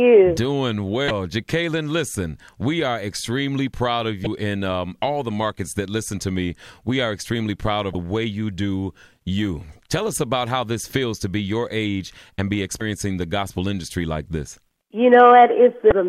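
Damaged data in a compressed stream shows up as five brief glitches at 1.07–1.11, 4.23–4.27, 7.92–7.95, 12.78–12.81 and 15.89–15.92 s, each lasting about 33 ms. Corrupted bytes made the decoder misread those frames and hunt for the next valid header. The result at each spot is a short chirp, squawk, click or hole in the sound.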